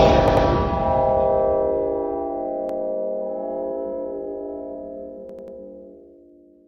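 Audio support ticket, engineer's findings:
Stutter, same 93 ms chunk replayed with hard joins: 0.28–0.46 s (twice extra), 2.69–2.79 s (once), 5.29–5.57 s (three times). Repeated buffer: playback device re-sent its last buffer when new audio arrived late. Length fits a 4096-sample buffer. Nothing skipped afterwards.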